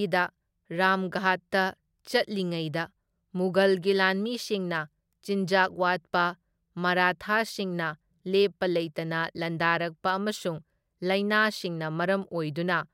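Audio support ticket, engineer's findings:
No faults found on this clip.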